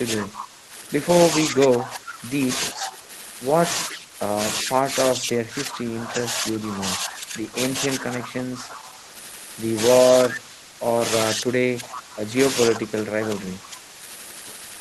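Speech suppressed in double talk, likely from an echo canceller that could not tell the near talker from loudspeaker echo while both sides spoke, pulls the voice down by roughly 10 to 20 dB at 0.16–0.73 s, 1.48–3.08 s, 3.86–9.12 s, 10.26–10.81 s, 11.35–12.22 s and 12.75–13.99 s, so it dips and breaks up in pieces. At 2.74–2.97 s and 3.91–3.98 s an echo leak, likely from a loudspeaker-side canceller letting pickup through, returns a copy about 387 ms late, roughly 15 dB under the speech.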